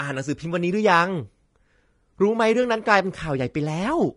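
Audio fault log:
throughout, low-bitrate audio saved at a high bitrate: the speech has nothing above 10.6 kHz and keeps the artefacts of an earlier encode, unlike a clean high-rate MP3, likely from an earlier low-bitrate encode.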